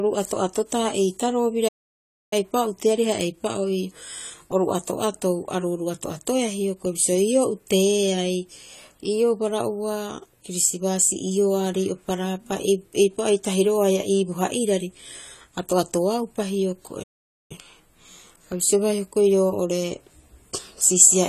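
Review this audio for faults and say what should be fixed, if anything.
A low-bitrate lossy encoder, likely AAC compression, discarded high frequencies and coarsely quantised the rest. The speech sounds dull and smeared, with fizzy sibilants and a warbling texture, which points to around 32 kbps. Encoding at a higher bitrate, or from the original source, would prevent it.

The player was starved of data or blocked, likely a playback stall, and its output went silent until it recovered. The speech stops in mid-flow from 1.68 to 2.33 s and again from 17.03 to 17.52 s, gaps of roughly 0.64 s and 0.47 s. A larger playback buffer or a more reliable delivery path would prevent it.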